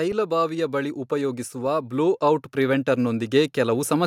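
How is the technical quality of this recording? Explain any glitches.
The recording has one clear fault. From 0.27 to 4.02 s, automatic gain rising lifts the level about 9 dB, voice and background swelling together, unlike a fade-in or speaker growing louder.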